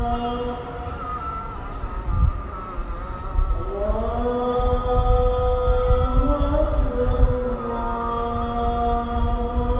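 Nothing here stands out as a fault; the sound just comes across as a normal call would, with the band topping out around 4 kHz, as you'd expect from a narrowband G.711 mu-law call path.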